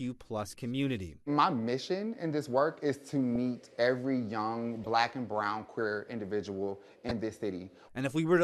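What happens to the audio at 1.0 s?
Nothing goes wrong at 1.0 s; the speech plays through that moment intact, with no dropout, click or distortion.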